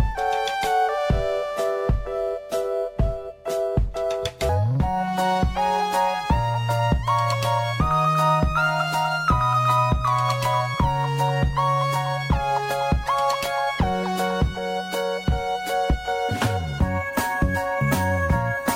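A section at the wrong speed runs from 4.49 s to the end of the clip: from that point the audio plays at 1.26 times its recorded rate, so everything is hurried and sits about four semitones higher than the opening. Because pitch and tempo shift together at one instant rather than drifting, the likely cause is that this portion was played or rendered against a clock faster than the one it was recorded with.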